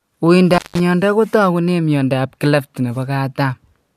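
An intermittent contact fault occurs from 0.54 to 0.80 s. A loose cable or plug in the signal path briefly loses connection, so the speech drops out for roughly 170 ms within that span. Each edge of the gap, where the contact breaks and then reconnects, carries a short burst of crackle. While the line is open, faint hiss remains before the speech returns abruptly.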